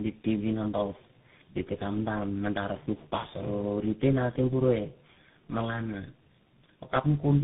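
From start to finish the speech carries tandem speech coding. It passed through G.723.1, G.711 A-law, GSM full rate, G.711 mu-law and finally CVSD, so three separate speech coders each re-encoded the previous one's errors. The result sounds rough, muffled and warbly. On a spectrogram, energy stops dead near 3.8 kHz, and the harmonic bands look smeared and unsteady. The waveform shows a grainy, slope-limited texture from CVSD.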